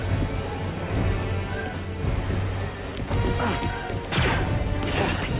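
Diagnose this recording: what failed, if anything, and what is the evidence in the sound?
Nothing failed; no stage in the chain shows a fault.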